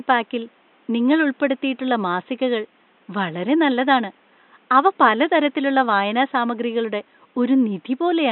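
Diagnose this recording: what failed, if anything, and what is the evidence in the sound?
Nothing in the chain has failed: the speech signal is intact throughout, and the only other thing audible is the room's own background noise sitting about 38 dB below the speech, which belongs to the recording space rather than to any stage of the system.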